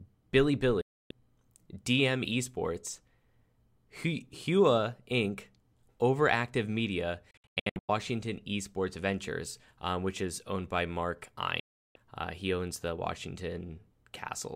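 Speech with digital broadcast dropouts: the receiver mutes on bad frames, cutting abruptly to silence at 0.81–1.11 s, 11.60–11.96 s, and in scattered short holes across 7.31–7.89 s.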